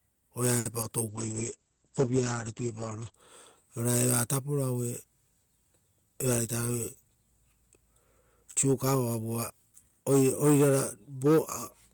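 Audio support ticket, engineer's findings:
Short stall from a late packet, 0.59–0.67 s. Speech held too long, slight buzz. Jitter buffer ran empty; receiver stretched the last sound about 60 ms until the packet arrived, then resumed in place. Nothing lost. Delay up 60 ms.

Short concealed packet loss, 0.81–0.84 s. Brief smear or wobble. About 20 ms never reached the decoder in time. Receiver extrapolated the preceding sound to cover the gap, then crossfaded back to real audio. Short consonant may drop.

Call bitrate drop, 1.1–3.22 s. Speech turns rough and muffled. Bandwidth estimate fell, and the encoder went from 32 to 10 kbps, holding the lowest rate about 2 s. Audio band narrowed from 20 kHz to 8 kHz. Clears on recovery.

Jitter buffer speed-up, 6.69–7.62 s. Speech sounds hurried, pitch unchanged, about 106% speed. Buffer held excess audio. Receiver trimmed short pitch-period pieces repeatedly, around 50 ms in total, to cut latency back to target.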